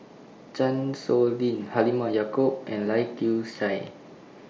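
Nothing stood out on listening to this speech, which comes over a Bluetooth mSBC headset link.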